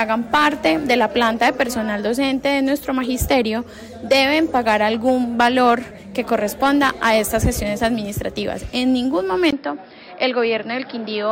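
Input switched to a poorer device at 9.51 s, likely: after a 20 ms gap the audio turns duller, with nothing above 5.4 kHz, a faint new noise floor and unchanged level.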